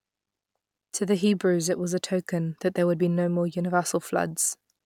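No technical faults can be heard anywhere in the recording.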